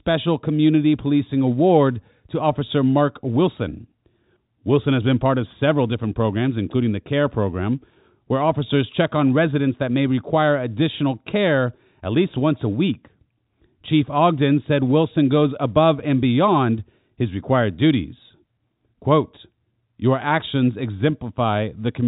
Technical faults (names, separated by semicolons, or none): none